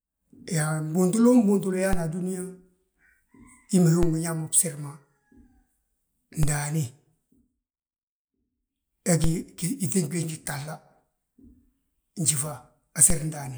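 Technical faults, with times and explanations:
1.93, 4.03, 6.43, 9.24 and 13.10 s: DC step. At each of these points the zero line of the speech waveform jumps suddenly by about −14 dBFS, so you get a low thump or click while the talking carries straight on unaffected. The offset doesn't hold. It bleeds away as if through a 5 Hz high-pass, so the baseline drifts back to centre within a fraction of a second, and each jump lands as a single dull bump.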